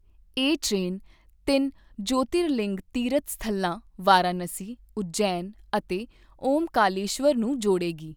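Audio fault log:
No faults detected anywhere in the speech recording.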